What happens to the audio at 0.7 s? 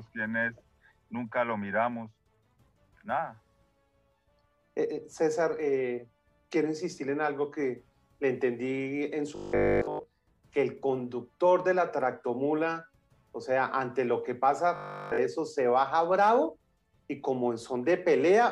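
Nothing goes wrong at 0.7 s: the audio plays through that moment intact, with no dropout, click, distortion or other fault.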